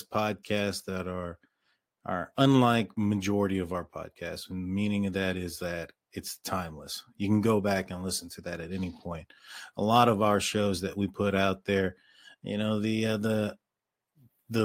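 No technical faults can be heard anywhere in the recording, so there is nothing to describe in time order.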